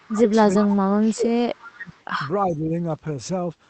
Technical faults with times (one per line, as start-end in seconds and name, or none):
0.00-1.45 speech suppressed in double talk
0.55-0.66 echo leak
1.60-2.03 echo leak
1.74-1.97 speech suppressed in double talk
2.47-2.73 speech suppressed in double talk